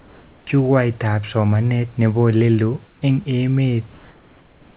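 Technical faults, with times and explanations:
0.00–0.47 s, 2.87–3.02 s and 3.92–4.77 s, comfort noise in place of the background: during these pauses the sender likely stopped transmitting under discontinuous transmission, and the receiver filled the gaps with synthetic noise. For 0.47 s, 0.15 s and 0.85 s, the textured room background, about 32 dB below the speech, becomes a smooth, featureless hiss. That hiss is about 2, 6 and 3 dB quieter, so the background dips. The first gap ends just before "jukwaitab somanet nebo".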